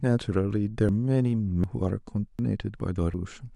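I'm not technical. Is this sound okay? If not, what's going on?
No. The speech skips forward four times, at 0.89, 1.64, 2.39 and 2.39 plus 0.75, that is 3.14 seconds, evenly spaced. This is audio missing between chunks. The likely cause is a recorder handling sound in one-second pieces that drops roughly a third of a second each time it moves from one piece to the next. The remaining audio is butted together with no gap.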